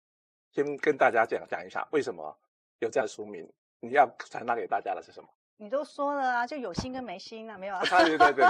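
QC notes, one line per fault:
3.00 s and 7.14 s, compressed frames skipped. The audio jumps ahead, by about 70 ms at 3.00 s, which fits a few frames, and about 20 ms at 7.14 s, likely a single frame.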